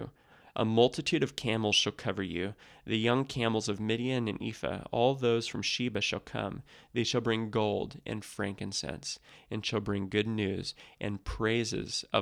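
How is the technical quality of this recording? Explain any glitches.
No glitches turn up anywhere in this speech recording. There's nothing to explain.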